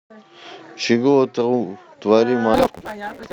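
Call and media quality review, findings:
Block size mismatch (truncated), 2.54 s to clip end at 3.32 s. Upstream stage writes longer blocks than downstream reads, so block tails are discarded. Steady 172 Hz buzz at the block rate, fitting a 256-sample read. Speech runs 1.88x fast with timbre intact.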